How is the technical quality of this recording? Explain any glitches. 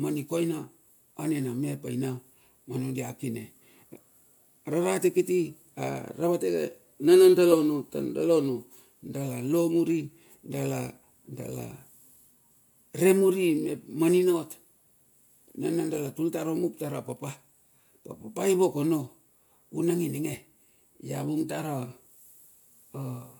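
No glitches turn up anywhere in the recording, and the signal holds steady throughout with nothing breaking into it.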